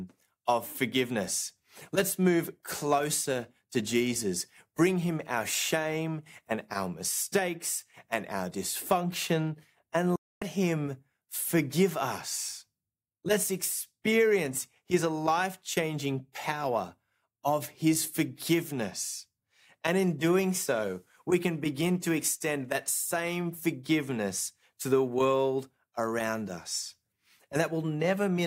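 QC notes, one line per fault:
10.16–10.42 s digital broadcast dropout: speech fades out within 3 ms and is muted for 256 ms while the receiver discards corrupt frames, which fits about eight lost frames.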